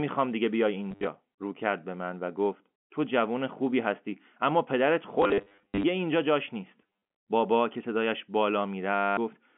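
Packet loss with the last packet repeated affects this telephone-band speech recording at 0.86–1.07 s, 5.22–5.84 s, 6.82 s and 8.95–9.17 s. The receiver fills each gap by replaying the most recent packet until fresh audio arrives. The replays don't match the pitch period, and runs of up to 60 ms produce a robotic stutter. Its buzz points to roughly 10 ms packets, around 100 Hz, heard through the G.711 line's 200–3400 Hz band.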